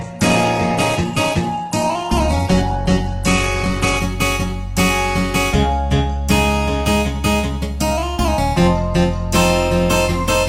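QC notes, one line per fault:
0.00 to 4.00 s, adaptive stream starting at a low bitrate: the opening four seconds are band-limited, with nothing above about 12.1 kHz, and codec artefacts are strong. This points to a low-rate Opus version, roughly 12 kbit/s. The player chose it to begin playback quickly. Once it had measured the connection, it switched to a better version, closer to 64 kbit/s. At 4.00 s the quality lifts suddenly. There is no gap at the switch.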